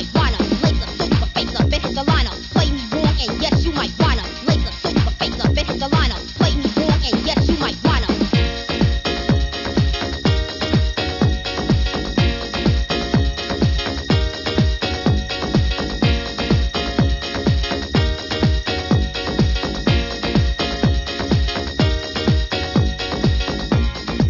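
No technical faults are audible anywhere in the audio.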